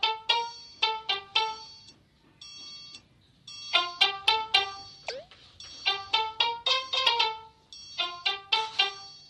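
Nothing stood out as a technical fault on listening to this recording.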